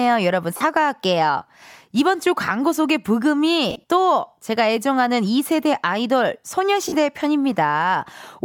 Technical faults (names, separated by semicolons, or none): lost LE Audio frames